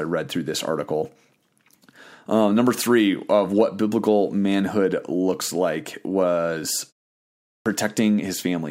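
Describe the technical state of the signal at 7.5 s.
At 7.5 s the signal sits inside a clipped start after a pause, running from 7.2 to 7.66 s. A pause of 0.36 s precedes it, long enough for the output device to drop into a sleep state. On resuming it needs time to wake and relock, and roughly 0.46 s of the incoming speech is swallowed. The speech therefore emerges abruptly from silence with its opening sounds missing.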